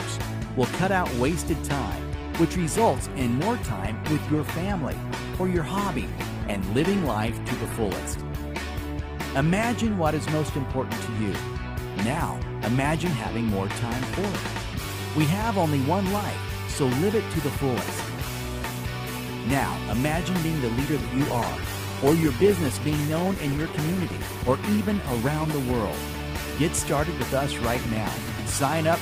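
From 3.25 to 10.27 s and from 21.19 to 26.78 s, a call bitrate drop turns the sound coarse and muffled, which fits the encoder falling from about 96 kbps to under 20 kbps. On a spectrogram the upper band is cut away and lower detail looks smeared for about 5 s and 3 s.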